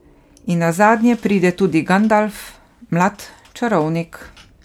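Throughout the speech there is a swirly, hollow smear with blurred consonant attacks, likely generation loss from roughly seven MP3 passes at a rate that fits 128 kbit/s. Content still reaches 20.1 kHz, so a single low-bitrate encode wouldn't explain this degree of smearing.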